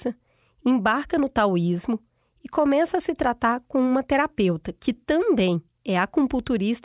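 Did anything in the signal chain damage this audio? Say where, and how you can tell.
No, nothing in the signal chain has left an audible mark on this speech recording. At no point in the clip can any stage, from capture through to playback, be heard altering the sound.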